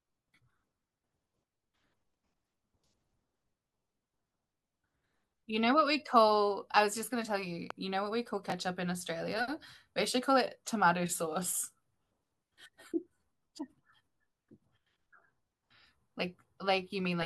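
A speech clip with two brief faults close together. At 7.70 to 7.73 s there is a single loud pop, a sharp thump roughly 10 dB above the speech, which carries on underneath. The likely cause is a sudden voltage pulse from a plug, switch, static discharge or driver glitch. At 8.50 to 8.52 s the chunks are out of order. A 10 ms slice of audio plays one chunk late, after the slice that should follow it. Nothing is lost, but the swapped order and hard joins make a short jumbled moment.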